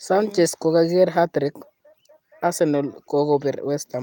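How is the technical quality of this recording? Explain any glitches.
The technical quality of this recording is sound, with no glitches to explain.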